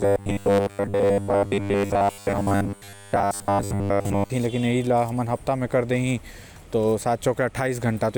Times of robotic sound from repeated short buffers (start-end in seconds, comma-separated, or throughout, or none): 0.01-4.30